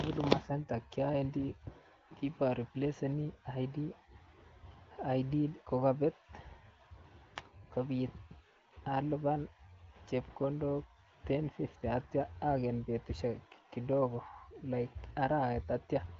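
No technical faults can be heard anywhere in the recording. The speech carries the band-limited sound of AMR wideband (HD Voice) coding, with nothing above about 7.5 kHz and only faint coding roughness at most, which fits a higher rate around 18 kbit/s.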